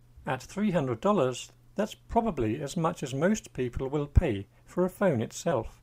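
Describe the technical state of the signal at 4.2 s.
At 4.21 to 4.25 s, compressed frames skipped: the decoder never plays a short run of the coded stream, either because those frames are absent or because it rejected them as corrupt. The gap points to about two frames of roughly 10 ms each, so around 20 ms of audio vanishes and the sound jumps ahead.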